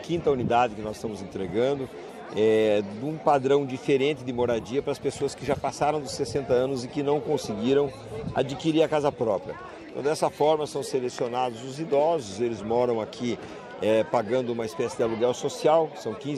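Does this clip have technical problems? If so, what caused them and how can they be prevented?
Yes. A single loud pop appears from 11.19 to 11.21 s, standing roughly 10 dB above the surrounding sound. It is most likely an electrical pulse, from a plug, switch or static discharge, entering the signal chain. Secure connections and avoid switching equipment while recording.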